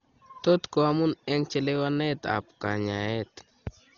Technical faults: Dolby Digital compression

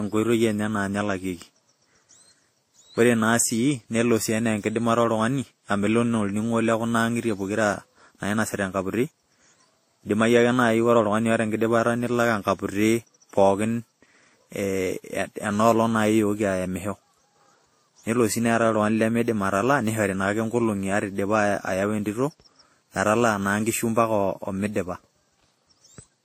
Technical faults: transcoding between lossy codecs

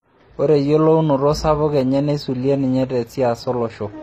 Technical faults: transcoding between lossy codecs

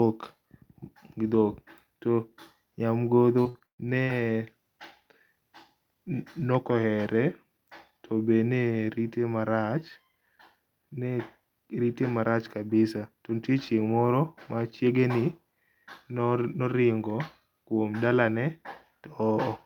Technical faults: repeated packet loss (robotic sound)

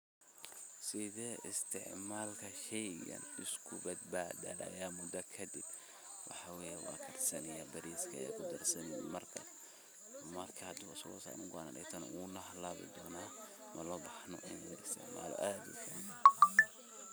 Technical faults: none

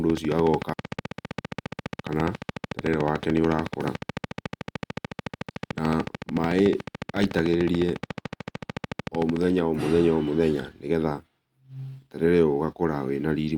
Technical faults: train of clicks; skip ahead; jitter buffer speed-up

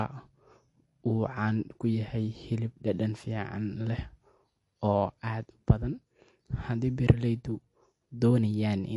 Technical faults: MP3 compression

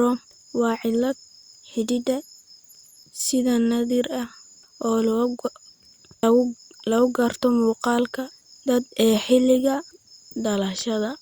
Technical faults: none

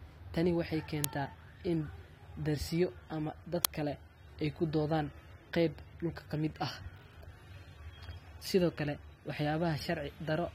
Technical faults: uninitialised buffer

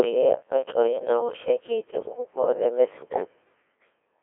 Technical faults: Codec 2 vocoder

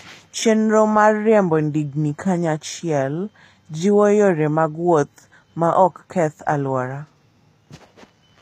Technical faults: HE-AAC compression

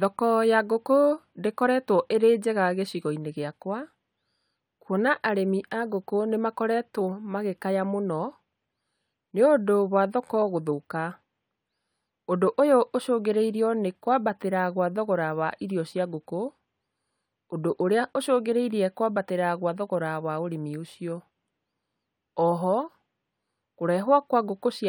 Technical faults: none

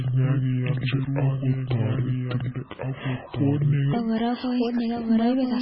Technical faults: doubled audio track; MP3 compression; section at the wrong speed

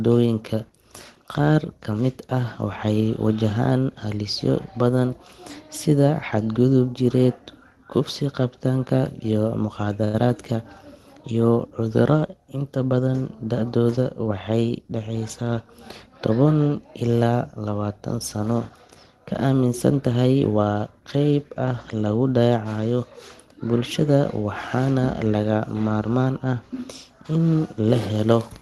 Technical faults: short stall from a late packet; jitter buffer speed-up

